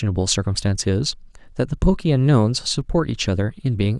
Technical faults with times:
none

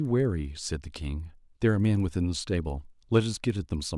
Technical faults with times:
0.00-3.98 resampler restarted on every block

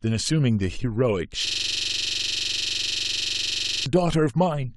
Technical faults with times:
1.47-3.86 system hang loop

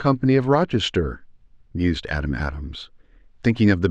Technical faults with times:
none

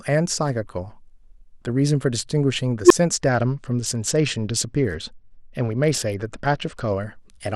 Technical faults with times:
2.83-2.91 unstable filter
3.28-6.92 Bluetooth SBC bit pool drop

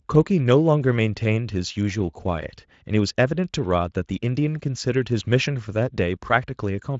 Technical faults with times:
none

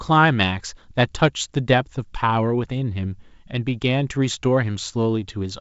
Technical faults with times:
none

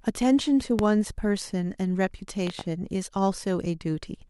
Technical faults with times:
0.79-0.83 loud pop
2.47-2.63 loud pop

